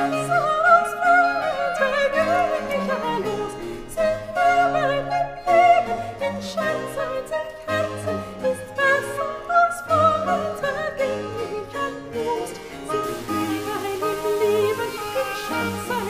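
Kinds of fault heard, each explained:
Low bit depth without dither: From 13.04 s to the end at 16.09 s the sound turns grainy and rough. The grit follows the signal, and it is loud, only about 20 dB below the signal. The likely cause is plain rounding to a very coarse scale, consistent with about 6 bits. Unlike dithered requantisation or added noise, the error follows the waveform, so the quietest parts sputter or fall silent.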